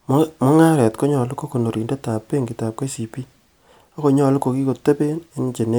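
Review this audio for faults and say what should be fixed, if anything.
I found no faults in this audio, so nothing needs to be fixed.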